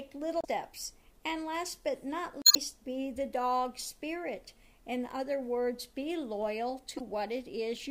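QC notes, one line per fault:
0.41–0.45 s, 2.42–2.57 s and 6.96–7.01 s: damaged data in a compressed stream. Three short glitches break the sound, lasting about 46 ms, 148 ms and 42 ms. Each is a brief chirp, squawk, click or short hole. Corrupt bytes in the coded stream make the decoder misread those frames. It loses frame sync and hunts for the next valid header. The garbled output in between is what sounds like a blip. The middle event is longest.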